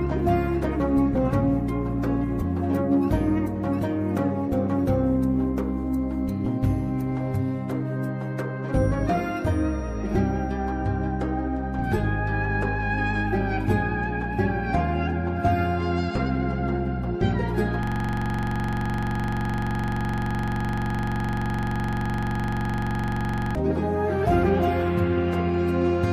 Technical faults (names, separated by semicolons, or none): system hang loop